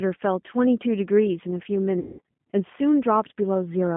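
Speech squeezed through the G.729 codec from start to finish, and the damage is plainly audible: everything sits in a narrow telephone band of roughly 150 Hz to 3.5 kHz, so there's no air or sparkle on top and the low end is thin. At 8 kbit/s the codec rebuilds each short frame from a vocal tract filter, a pitch predictor and a few pulses, which leaves the voice a bit rough and synthetic. Then at 1.99 s there's a stretch of VoIP packet loss concealed by the speech codec, running to 2.20 s. About 200 ms of audio goes missing, which fits around ten 20 ms packets being dropped. The decoder papers over the hole by repeating its last pitch and filter settings at falling gain, so that stretch smears into a buzzy tone or coloured noise that fades. Because each frame is built on the one before, the voice comes back weak or distorted for a moment after the gap.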